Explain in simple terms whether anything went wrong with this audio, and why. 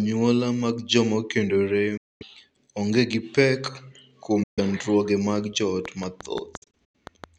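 Bluetooth dropout, three times: 1.97 to 2.23 s, right after "mag joma okendore"; 4.43 to 4.59 s, just after "onge gi pek kuom"; and 6.57 to 6.95 s, as several short gaps, the longest about 0.09 s. The sound cuts to silence and picks up later as if it had kept playing. The likely cause is wireless audio arriving too late for the headphones to play, so those pieces were skipped.

Train of clicks, from 5.85 to 7.25 s, starting after "mag joot". About ten sharp ticks come at a steady six or so per second, standing out clearly above the speech. This is likely interference from nearby equipment or a struggling audio connection.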